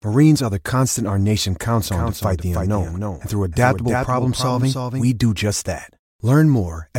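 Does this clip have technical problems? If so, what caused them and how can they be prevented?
Yes. From 1.86 to 5.06 s, after "the constant our nation" and before "do just that", the speech gains a dry, abruptly cut echo: a doubled audio track, with a copy about 5 dB quieter trailing roughly 300 ms behind. This is likely a second, slower capture path or an edit holding two out-of-step copies. To prevent it, route each source through only one input and check edits for overlapping duplicate regions.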